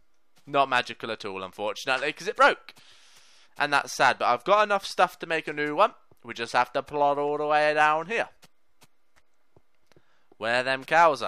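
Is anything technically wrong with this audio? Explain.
No, nothing technically wrong can be heard here.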